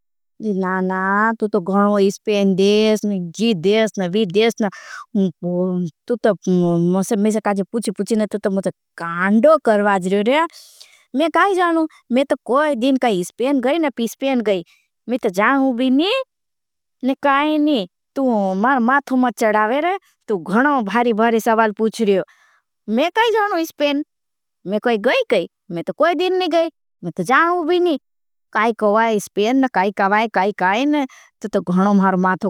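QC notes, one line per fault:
No faults were heard in this speech clip. Nothing in it calls for a QC note.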